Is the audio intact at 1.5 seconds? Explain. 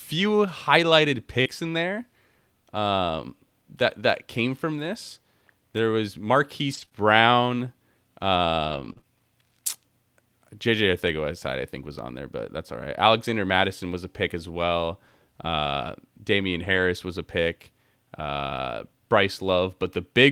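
No. From 1.41 to 1.47 s, just before "in there", there is short concealed packet loss. About 40 ms of audio never arrived in time, and the receiver filled the gap by extending the preceding sound before blending back into the real signal. This is heard as a brief smear or wobble.

Overlapping the end of that span, from 1.45 to 1.47 s, is a lost packet rebuilt from error correction. The following packet carried a low-bitrate copy of one 20 ms frame, which the decoder played in its place, so there is no gap, but that stretch sounds rougher and noisier.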